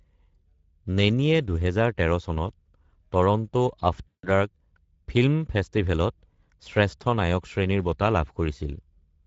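Throughout, the speech carries the Speex codec's plainly audible damage. Voices sound hoarse and noisy. The damage points to a middle-quality setting, which fits about 16.8 kbps. The few bits for the excitation leave the voiced sound rough and grainy.

From 4.08 to 4.27 s, VoIP packet loss concealed by the speech codec takes over. Packets went missing for about 0.16 s. The decoder kept repeating its last pitch and filter with falling gain. The speech smears into a buzzy tone or coloured noise that fades.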